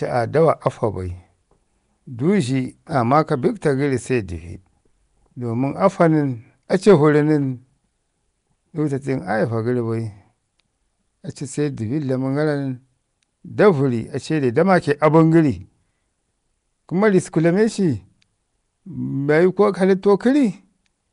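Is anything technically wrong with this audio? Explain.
Yes, there are two problems. Throughout, the speech carries a rough, hissy halo and a smeared, underwater quality, and nothing is present above 10.6 kHz. The likely cause is Nellymoser compression, Flash's old microphone codec, at a rate that fits about 44 kbps. It codes short blocks with a fixed bit budget, so weak bands get no bits and are replaced by noise. Unlike ordinary low-bitrate hiss, that noise follows the speech's spectral shape block by block.

There is also hard clipping from 0.48 to 0.67 s, overdriven by about 2 dB, and from 6.88 to 6.94 s, by about 4 dB. Peaks larger than the stage could pass were cut flat, and the flat tops add harmonics high in the spectrum. Both are heard as brief crackle on loud moments, sharper in the second. Soft saturation would round the peaks and sound warm, but these sound abrupt and edged.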